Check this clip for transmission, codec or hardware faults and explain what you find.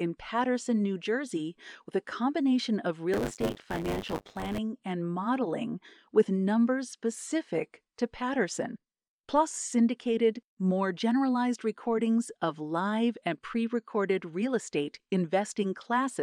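One fault is present: buffer tearing, from 3.13 to 4.59 s, between "with a combination of" and "and modeling with numbers". The buffer's writer and reader have slipped. About a fifth of each period is stale audio, some tens of milliseconds old. The hard joins produce a robotic 100 Hz buzz.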